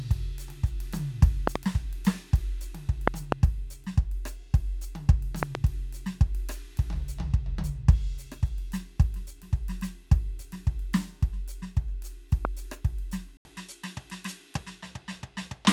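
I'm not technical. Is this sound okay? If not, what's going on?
No. The music has two kinds of problem.

First, loud pops. You hear a sharp pop or thump jump out above the music, which keeps playing underneath. There are double pops at 1.47 to 1.58 seconds, 3.08 to 3.34 seconds and 5.43 to 5.57 seconds, and a single one at 12.45 seconds. These are likely caused by a sudden electrical jolt, such as a plug, switch or static, getting into the signal.

Second, an input switched to a poorer device. At 13.37 seconds the sound drops out for a split second. It then comes back quieter and duller, with nothing above about 12 kHz, so the crisp top end is gone. A faint new background noise sits underneath. It stays like this to the end. The likely cause is the recording switching to a lower-quality microphone partway through.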